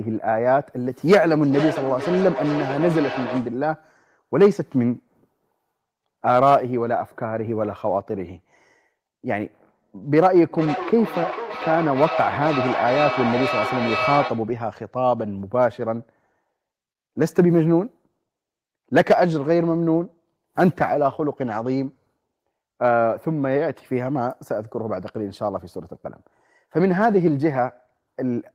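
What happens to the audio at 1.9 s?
At 1.9 s a microphone is picking up a loudspeaker carrying the same call, and each pass round that loop comes back louder. The result is a feedback howl from 1.1 to 3.67 s, a tone near 700 Hz with the loop repeating roughly every half second, peaking about 8 dB below the speech.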